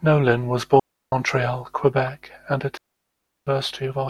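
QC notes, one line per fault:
0.79–1.12 s and 2.77–3.47 s, digital wireless dropout: the radio link lost too much data for the receiver to conceal, so it muted the output with a very fast fade instead of passing corrupted audio. The speech drops into clean holes of near silence, about 0.33 s and then 0.69 s long, with no crackle or noise burst at either edge, and resumes abruptly once the link recovers.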